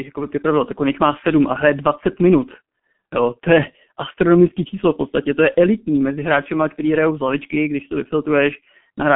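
From start to finish the speech carries G.723.1 codec damage, and it is heavy. Nothing is present above about 3.7 kHz, and the usable band sits between roughly 150 Hz and 3.4 kHz, so the sound is muffled and thin at both ends. The coder rebuilds each 30 ms frame from a coarse, slowly updated vocal model, which fits a bitrate near 6 kbit/s. That leaves a hoarse, buzzy texture and smears consonants together.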